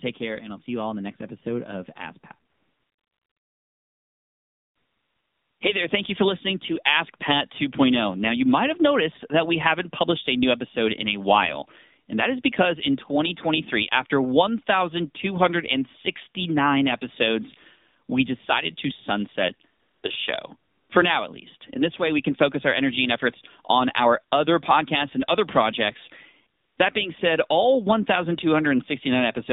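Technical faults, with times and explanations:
Throughout: AMR narrowband mobile codec. Sound is confined to roughly 200 Hz to 3.7 kHz and has a buzzy, synthetic edge that points to a low mode near 7.4 kbps. On a spectrogram nothing appears above 3.7 kHz.
2.50 to 5.60 s: AMR comfort noise. For 3.1 s the real background is replaced by steady, smooth synthetic hiss. The spectrogram shows a flat, featureless band, and the waveform shows a uniform low-level envelope with abrupt edges.
19.80 to 20.04 s, 20.70 to 20.90 s and 26.58 to 26.78 s: AMR comfort noise. These brief drops of 200 to 240 ms fall after "we decided to sunset", after "to sunset the show" and after "podcasts and other projects". Each shows as a smooth noise patch.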